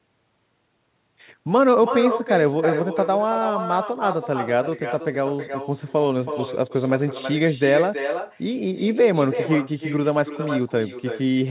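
No echo canceller is working at the far end of this speech call, so the loudspeaker sound leaks back into that microphone and returns after the network round trip. Throughout, every phrase is shadowed roughly a third of a second later by a thinner copy about 8 dB quieter, all within the narrow band that stops at 4 kHz on this call path.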